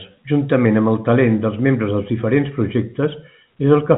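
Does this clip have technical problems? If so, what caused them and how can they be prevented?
Yes. From 0.66 s to the end, the speech turns dull and muffled. This is de-emphasis applied wrongly: a treble cut ran on audio without pre-emphasis, or ran twice, sloping highs down by about 14 dB at 10 kHz. The G.711 telephone coding itself adds only faint noise. Prevent it by applying de-emphasis exactly once, only where pre-emphasis was used.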